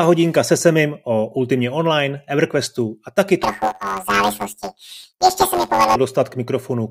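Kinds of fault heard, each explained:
Planar audio read as interleaved: after "a taky", from 3.43 to 5.96 s, the 10.88 ms channel blocks get read as alternating pairs, giving a robotic buzz at about 92 Hz.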